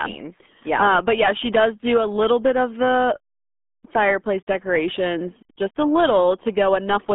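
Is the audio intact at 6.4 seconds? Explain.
No. The RealAudio 14.4 codec artefact runs through the whole clip, so it is present at 6.4 seconds too. The speech has been squeezed through a very low-rate dial-up codec, and the heavy damage fits an 8 kbit/s stream. Content is confined to a telephone-like band of about 200 Hz to 3.5 kHz, with nothing above 3.8 kHz. The voice sounds muffled, thin and gargly, with its sibilance and crispness gone.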